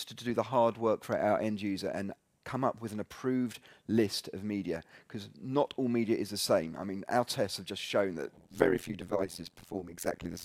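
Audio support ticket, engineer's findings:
Overlap-add ripple, 8.36 s to end. Metallic buzz around 100 Hz, level dipping about 60 dB each frame. Frame resynthesis windows overlap without summing to constant gain.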